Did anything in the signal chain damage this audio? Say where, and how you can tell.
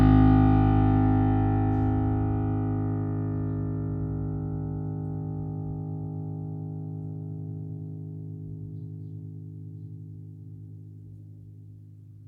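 No, nothing along the signal chain seems to have damaged this music clip, so there's no stage to point to.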